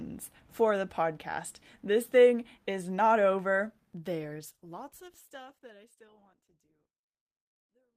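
Speech, and right after "thing is not over" the sound turns coarse and duller from 4.2 s to 7.29 s. This is a call bitrate drop: the encoder's rate fell from 32 to 15 kbps and stayed at the lowest setting for about 3.03 s, so it codes the speech more roughly and trims the top end. A spectrogram shows the upper band thinning and smearing across that span, overlapping the gentle fade-out that begins around 4 s.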